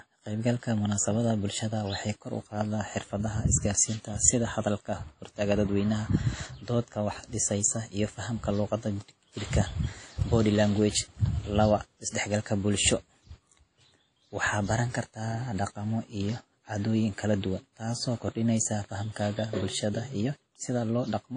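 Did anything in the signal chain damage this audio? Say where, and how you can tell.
Yes. Throughout the speech there is a ringing, washy smear with hiss that swells and fades with the signal, and nothing above 10 kHz. This points to the codec stage, likely WMA compression at a low bitrate around 32 kbps, where long transform blocks spread quantisation noise and weak lines are zeroed.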